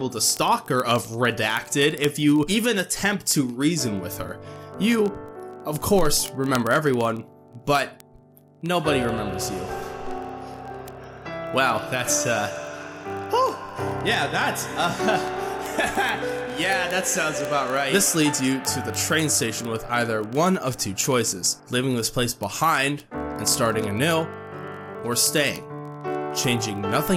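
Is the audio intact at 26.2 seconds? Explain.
No. At 26.2 seconds the audio sits inside word clock ticks that run from 0.12 s to the end. The receiving device is clocked independently of the sender, and the two clocks differ by roughly a thousand parts per million, so they slip past each other about every 20 ms, with one sample dropped or repeated at each slip. The result is a steady stream of sharp ticks, around fifty a second, of uneven strength.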